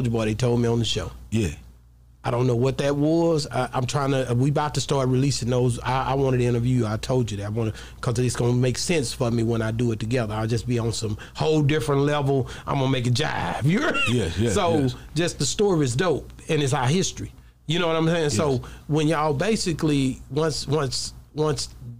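Nothing stood out as a technical problem at any point while listening to this recording.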